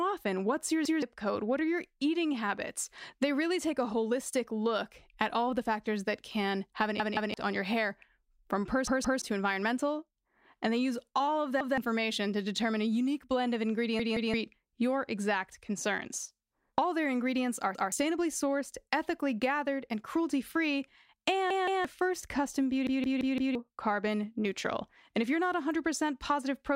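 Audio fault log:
0.85–1.02 s, 7.00–7.34 s, 8.88–9.22 s, 11.61–11.78 s, 14.00–14.34 s, 17.75–17.92 s, 21.50–21.85 s and 22.87–23.55 s, repeated buffer: a stutter where a slice of speech about 0.17 s long plays again with a hard join. It repeats once at three spots, twice at four, and four times after "first custom". New audio arrived late, so the device replayed its last block, which fits an 8192-sample buffer. Each event drops roughly 0.15 to 0.7 s of audio.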